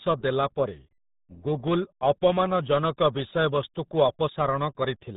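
Throughout, the speech sounds muffled and gargly, with nothing above about 3.9 kHz and heavy codec damage. This is the RealAudio 14.4 codec at work: a low-rate dial-up speech codec whose damage fits an 8 kbit/s stream.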